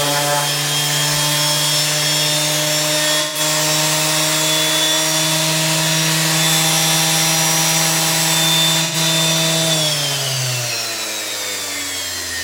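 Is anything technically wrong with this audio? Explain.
Yes. There is AAC frame loss with concealment, at 3.21 to 3.40 s and again at 8.84 to 8.96 s. The gaps last about 128 ms and 85 ms, which fits three and two lost frames. The decoder patched each hole from the last good spectrum, so the sound turns briefly smeared, noisy or phasey. On a spectrogram, fine detail gives way to a blurred, repeated-looking block. The waveform shows a short stretch lacking the surrounding structure.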